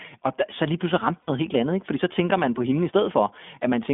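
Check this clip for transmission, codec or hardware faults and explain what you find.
Two faults are present. The speech runs through the iLBC codec for its whole length, and a short burst of lost iLBC frames interrupts it once.

The iLBC codec affects the entire clip. The band is limited to about 200 Hz to 3.5 kHz, so the speech sounds thin and telephone-like. The codec damage is plainly audible. iLBC codes each frame's excitation on its own, without help from the previous frame. At this rate that leaves a rough, slightly synthetic grain on the speech. The bitrate sounds consistent with iLBC's 15.2 kbps mode and 20 ms frames.

The lost iLBC frames fall between 1.22 and 1.30 s, a gap of about 60 ms. That length fits three consecutive 20 ms frames going missing. The decoder covers the gap by repeating the last pitch cycle, blended with noise. The result is a brief held, buzzy vowel where the speech should continue. 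Because each iLBC frame decodes independently, normal speech returns almost immediately after the gap.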